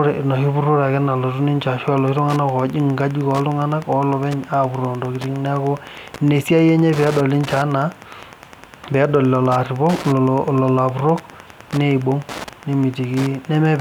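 From 1.8 s, after "nalotu ninche", Wi-Fi interference: a nearby radio's 102.4 ms beacon, rectified by the circuit, ticks steadily ten times a second, not as a continuous hum.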